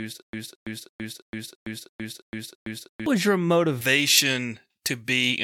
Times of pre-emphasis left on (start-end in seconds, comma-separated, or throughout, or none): 3.81-5.43